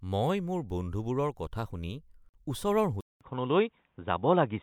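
At 2.29 s the speech drops out for about 48 ms, until 2.34 s. This is a gap at a join of encoded pieces. Two separately encoded segments were butted together untrimmed, so encoder delay and end padding remain. The edges are smeared, and speech resumes where it stopped.

From 3.01 s to the end, the sound changes character. A silence of about 200 ms comes first. Then nothing remains above 3.8 kHz, so the speech turns dull and boxy. A faint new noise floor sits far below the speech, and loudness stays roughly the same. This is likely an input switched to a poorer device, such as a headset call profile.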